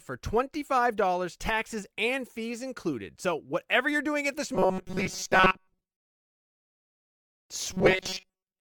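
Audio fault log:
4.55–6.46 s (after "you're doing at this") and 7.73–8.60 s: robotic sound from repeated short buffers. The speech turns into a rigid buzz fixed near 188 Hz, a pitch that likely comes from a roughly 5.3 ms slice being replayed for most of each stretch while new audio is skipped. The sound follows the original speech only roughly. Unlike codec warble, the pitch is steady and does not follow the speaker's intonation.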